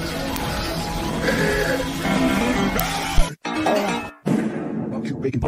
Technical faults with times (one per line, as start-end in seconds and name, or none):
0.36 uninitialised buffer
2.79 uninitialised buffer
3.18-3.23 phantom power thump